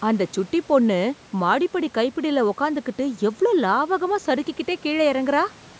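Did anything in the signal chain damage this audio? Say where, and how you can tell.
No, nothing in the signal chain has damaged this speech. The call microphone processing rolls off the lowest bass and leaves nothing above 8 kHz, and the room noise sits about 30 dB below the speech.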